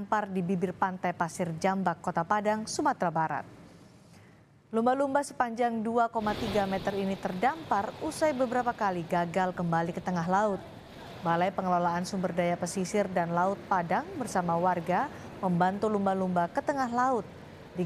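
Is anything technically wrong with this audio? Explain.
No, nothing here stands out as a technical problem, so there's nothing to flag.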